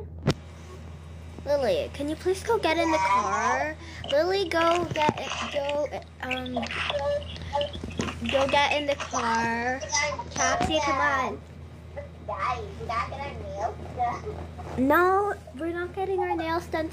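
Nothing here trips any alarms; the audio just runs along without a single glitch, dropout or odd artefact catching the ear.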